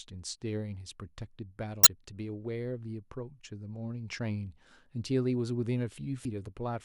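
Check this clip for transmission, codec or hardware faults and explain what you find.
Two short faults of one kind appear in this speech clip, both from damaged data in a compressed stream. They occur at 1.83 to 1.87 s and at 6.22 to 6.25 s, each lasting roughly 30 to 40 ms. At these points the encoded bytes are corrupt, so the decoder misreads or discards the affected frames, loses sync and scans forward for the next valid frame header. Each event is heard as a brief chirp or blip cutting into the speech.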